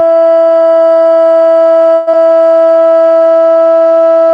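A long network dropout runs from 1.95 to 2.15 s in this music clip, which comes through an Opus call path whose coding noise and 8 kHz top end suggest a low bitrate of around 20 kbps. Over that span the music keeps going as a smeared continuation of the last sound. The receiver was filling the gap with about 174 ms of concealment, and roughly 100 ms of the original never plays, so the music resumes further ahead. A network stall is the likely cause, and it shifted the playout delay by around 30 ms. A jitter buffer slow-down follows from 2.23 to 3.39 s. To rebuild its reserve, the receiver repeats tiny slices of the waveform, stretching that passage by 79 ms. The music plays at about 93% of its normal speed while keeping the same pitch, so it sounds slightly dragged and drawn out.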